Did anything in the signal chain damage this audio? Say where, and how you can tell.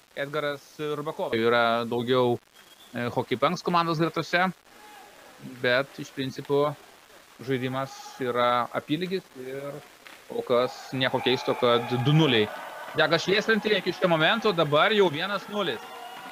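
Yes. Grainy, signal-dependent distortion runs through the whole clip, riding on the sound. It sits only about 30 dB below the signal, and quiet passages turn gritty or sputter. This points to low bit depth without dither, likely introduced at a sample-format conversion stage that rounded the samples to about 7 bits. Without dither, the rounding error tracks the waveform and becomes audible distortion.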